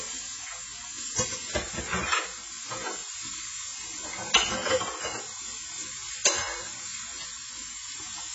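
Throughout, the sound stops dead above 7.7 kHz and warbles with fizzy, hollow patches, likely heavy AAC compression at a very low bitrate; plain filtering wouldn't smear like this.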